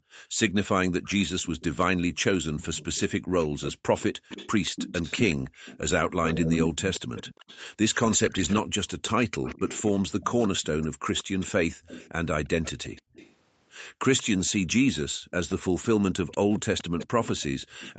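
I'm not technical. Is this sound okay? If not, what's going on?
No. There are two problems, both tied to the call's echo handling.

An echo leak runs from about 1.04 s to 17.94 s: a second copy of the voice follows the main voice by about 181 milliseconds, noticeably quieter. This is likely the far end's loudspeaker being picked up by its microphone and not fully cancelled. Unlike room reverberation, which smears smoothly, this is a distinct delayed repeat.

The background is gated by the echo canceller at 0.0 to 0.38 s, 3.2 to 3.31 s, 13.02 to 13.13 s and 15.12 to 15.31 s. The room sound suddenly drops to near silence for these moments, then snaps back. Unlike a network dropout, the room sound just dips cleanly instead of breaking up or glitching.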